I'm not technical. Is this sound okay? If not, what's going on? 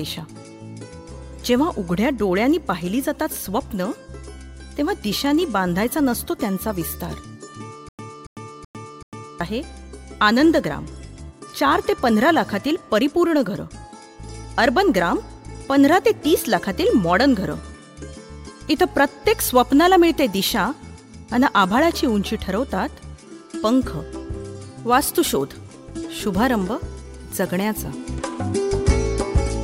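No. From about 7.89 to 9.41 s there's a stutter with silent gaps: the same short chunk, roughly a quarter second, plays four times with a brief dead silence between each. That's likely the playback stalling and retrying, so the sound meant for that moment is missing.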